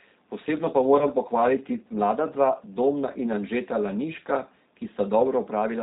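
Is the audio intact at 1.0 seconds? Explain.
No. From 0.99 to 1.09 s there is VoIP packet loss concealed by the speech codec: a gap consistent with one lost 20 ms packet is filled by extrapolating the previous pitch and filter, giving a brief, fading smear. Throughout, the G.729 codec at 8 kbit/s rebuilds speech from a filter and sparse pulses, so nothing above 4 kHz passes and the sound is plainly rough and synthetic.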